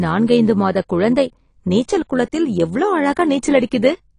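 Overlap-add ripple runs through the whole speech clip. The sound was split into windowed frames and rejoined with an overlap whose gains do not add up to a steady level, so the loudness swells and dips once per frame, by about 6 dB, around 100 times a second. That fast, regular pulsing gives the voice a metallic buzz with extra tones around it, a mechanical, robotic edge rather than a smooth tone.

Throughout the clip there is also a hard ceiling on the spectrum: nothing is present above 10.2 kHz, so the top end sounds dull and closed in. The codec damage is plainly audible, with a smeared, warbling texture on sustained sounds and fizzy, blurred sibilants. The likely cause is AAC compression, specifically AAC-LC at a low bitrate. The low cut-off and the coarse quantisation of the spectrum point to a rate in the region of 32 kbps.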